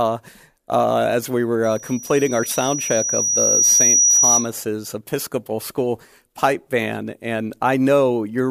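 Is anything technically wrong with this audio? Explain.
Yes. From 1.63 s to 4.52 s a single high tone at 5.8 kHz rises out of the sound, swelling over roughly two seconds into a piercing squeal that ends up about 5 dB louder than the audio itself, then stops. This is loudspeaker feedback squeal: the microphone was hearing the loudspeaker it fed, and around 5.8 kHz the loop returned more than it received, so that pitch kept reinforcing itself until it stopped.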